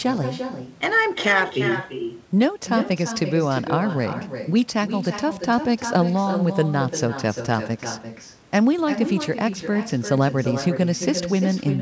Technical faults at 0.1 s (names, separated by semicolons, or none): echo with no canceller